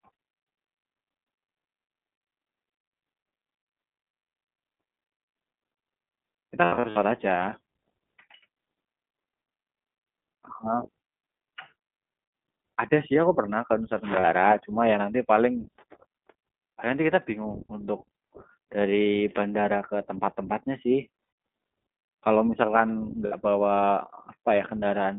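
Throughout, the speech is carried by the iLBC codec. Everything sits between about 200 Hz and 3.7 kHz, and the sound has a plainly audible rough, synthetic grain. That grain separates it from a simple telephone band-limit, and the coding fits a 15.2 kbps, 20 ms frame mode.

Lost iLBC frames break up the speech at 6.64–6.98 s, where 220 ms of loss is scattered across the span with runs of up to around 70 ms, and again at 14.20–14.25 s (40 ms), 21.24–21.38 s (140 ms) and 23.26–23.34 s (60 ms). Each gap turns into a held, slightly buzzy or breathy vowel-like tone, and the voice is right again almost at once afterward. That quick recovery is what distinguishes it from codecs whose errors smear into later frames.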